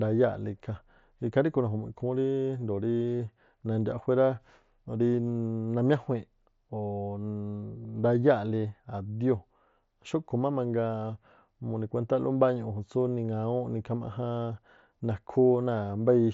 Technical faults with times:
3.18 concealed Bluetooth headset packet loss
7.83 concealed Bluetooth headset packet loss

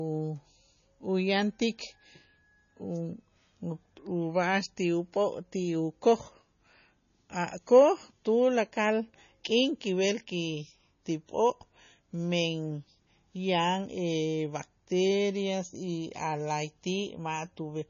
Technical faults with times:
0.00-17.90 MP3 compression

